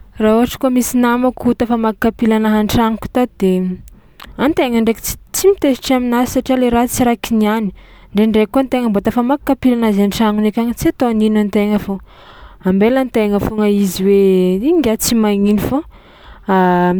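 No technical faults occur anywhere in the speech, so there are none to describe in time order.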